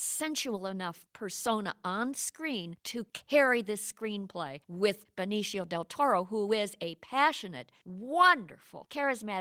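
Single packets went missing three times, and each was rebuilt from the lower-bitrate backup copy carried in the following packet, the Opus in-band error correction. This is a lost packet rebuilt from error correction, at 0.55 to 0.57 s just before "enough persona on screen", at 3.45 to 3.47 s between "persona on screen to" and "this screenplay with", and at 7.87 to 7.89 s right after "who is a passionate". Each patch lasts about 20 ms, which fits one lost packet. There is no gap, only a brief rougher, noisier texture in the speech.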